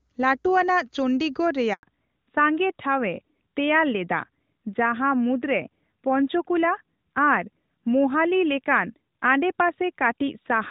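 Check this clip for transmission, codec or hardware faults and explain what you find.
Two faults are present: a short handover gap, then a fallback to narrowband that lasts until the end.

At 1.73 s a handover gap of 100 ms begins. While the call switched networks, no speech frames arrived, so the voice dies away within a few tens of milliseconds and stays silent until 1.83 s. On a waveform this is a flat line; on a spectrogram it is a blank vertical band across all frequencies.

From 1.83 s onward there is a fallback to narrowband. Before the gap, the clear HD Voice sound suggests AMR wideband at a high rate. Afterward, the sound points to a narrowband AMR codec near 12.2 kbit/s, with nothing above 4 kHz. The voice becomes duller and rougher. On a spectrogram the energy stops sharply at a 4 kHz ceiling.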